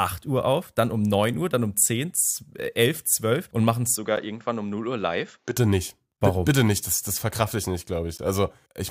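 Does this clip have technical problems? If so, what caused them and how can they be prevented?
Yes. Four short, hard-edged dropouts break the speech at 2.16, 4.16 (just after "und machen es"), 6.17 and 8.18 s (after "das verkrafte ich nicht"), lasting about 4, 10, 8 and 14 ms. They are gaps between stream segments: every two seconds, a segment's timestamps leave a small hole that the player fills with silence, though no audio is lost. Prevention: make each segment's timestamps continue exactly where the previous one ends.

From 3.95 to 5.57 s, beginning right after "und machen es", the voice turns duller and about 5 dB quieter, with nothing above 7.6 kHz and a faint new noise floor roughly 40 dB down. There is no silence at either change. This likely comes from the input switching to a poorer device and back. Prevention: lock the recording to one chosen microphone so the system cannot switch inputs mid-take.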